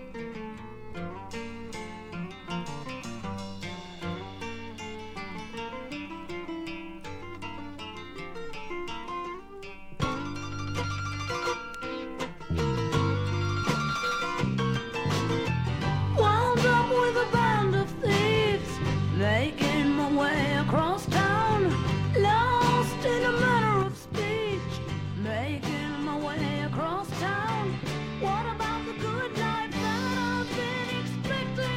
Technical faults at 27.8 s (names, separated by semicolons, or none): sudden gain jump